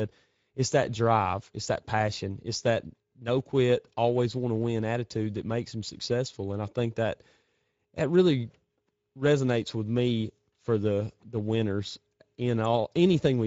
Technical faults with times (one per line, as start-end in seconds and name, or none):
0.00-13.47 Speex codec